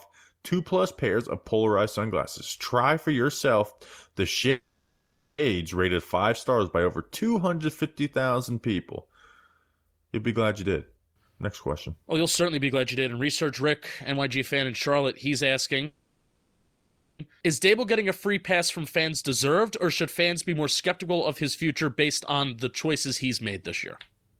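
At 4.50 s, after "for yourself the", there's a call audio freeze: the last sound stretches into a fading buzz, then about 220 ms of silence, and "rated five stars by" resumes 0.88 s late. It's likely packets stalled and the jitter buffer ran dry. Around 10.60–15.83 s, after "be glad", comes a jitter buffer speed-up. Short pitch-period slices are cut to drain the backlog, so the speech runs at 112% and sounds rushed at unchanged pitch, losing roughly 0.7 s. A second freeze at 15.86–17.20 s fills 1.33 s with fading sound and almost no silence. A milder 105% speed-up at 18.60–21.43 s, from "getting a free" to "future based on the", trims roughly 0.15 s.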